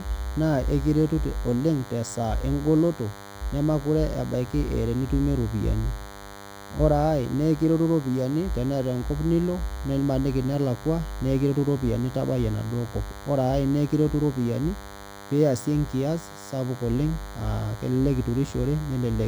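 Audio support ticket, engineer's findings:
DECT cordless phone buzz throughout the speech: steady thin buzz at 100 Hz, roughly 20 dB under the voice. Spectrogram: horizontal comb of 100 Hz harmonics reaching high up. Waveform: regular spikes every 10 ms. Cause: nearby DECT handset or base bursting, rectified in audio input.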